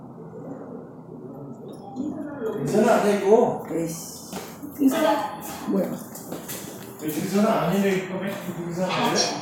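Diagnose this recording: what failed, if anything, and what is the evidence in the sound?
Nothing failed in this recording, and there is no evidence in the sound of any fault at any stage.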